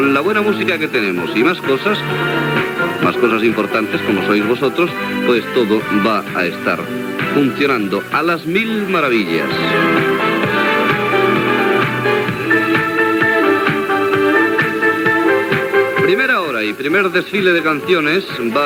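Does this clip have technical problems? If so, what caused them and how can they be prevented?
No, there are no technical faults to report and nothing here that needs preventing.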